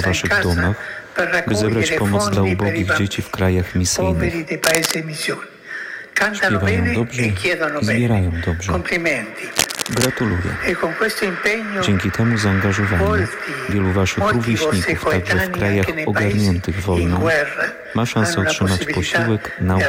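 Two bursts of cable scratch noise break into the sound, from 4.64 to 4.95 s at roughly the same loudness as the signal, and from 9.50 to 10.06 s somewhat quieter. Each is a dense, ragged crackle, likely from a worn lead or connector being moved.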